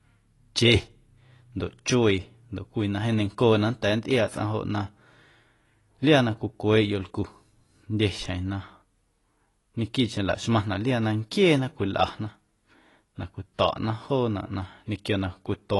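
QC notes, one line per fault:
Throughout: AAC compression. Nothing is present above 11.5 kHz, so the speech sounds dull and lacks air. Sibilants and sustained vowels carry a plainly audible warbling, fizzy smear. This is likely lossy AAC-LC coding at a low bitrate, which fits roughly 32 kbps. The encoder drops the top band to save bits and quantises the remaining frequency lines coarsely, leaving gaps that shift frame to frame and produce the swirling texture.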